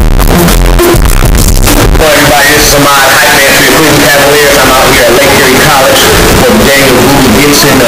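Throughout, the sound is very loud, harsh and nearly square-edged at an almost constant level, with background noise as loud as everything else: likely 32-bit float samples read as 32-bit integers.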